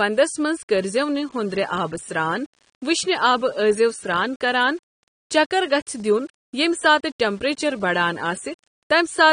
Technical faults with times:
0.00-9.33 low bit depth without dither
0.00-9.33 AAC compression
5.66-6.00 CD scratch ticks

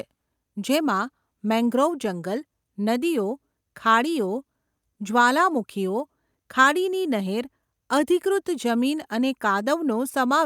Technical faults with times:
none

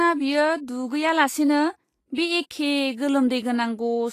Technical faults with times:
0.00-4.12 Vorbis compression

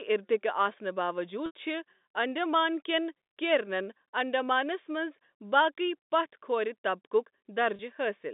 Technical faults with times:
1.46-1.51 packet loss with pitch repetition
7.76-7.79 packet loss with pitch repetition

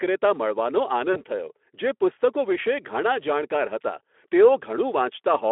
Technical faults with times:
1.13-1.24 VoIP packet loss concealed by the speech codec

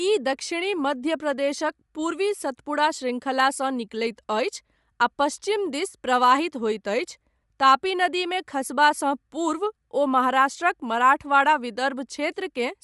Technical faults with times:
0.00-12.84 Bluetooth LC3 compression

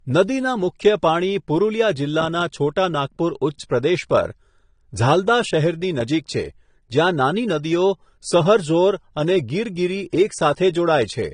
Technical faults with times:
0.00-11.34 low-bitrate audio saved at a high bitrate

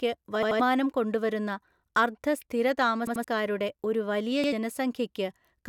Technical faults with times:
0.43-0.60 repeated buffer
3.07-3.24 repeated buffer
4.44-4.52 repeated buffer

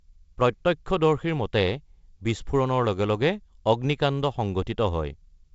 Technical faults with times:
none

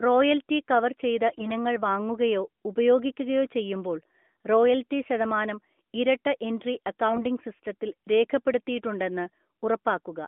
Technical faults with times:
1.30-1.52 AMR bit errors
7.08-7.24 AMR bit errors

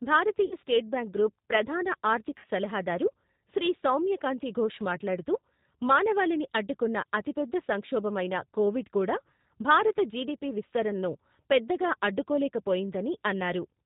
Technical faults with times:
0.00-13.86 G.729 codec
0.46-0.55 VoIP packet loss concealed by the speech codec
2.38-2.46 VoIP packet loss concealed by the speech codec

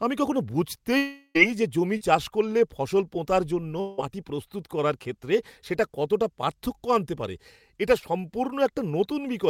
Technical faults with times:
0.97-1.37 long network dropout
1.97-2.02 short concealed packet loss
3.80-4.00 long network dropout
8.00-8.04 short concealed packet loss

